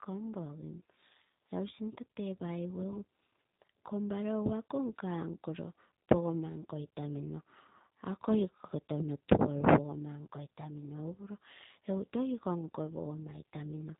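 Throughout, G.729 codec coding, consistent with an 8 kbit/s stream, rebuilds speech from sparse pulses, sounding plainly rough and synthetic. The spectrogram shows nothing above 3.8 kHz.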